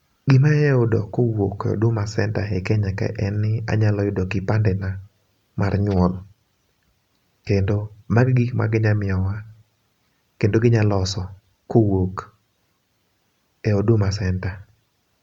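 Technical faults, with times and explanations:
No technical faults detected.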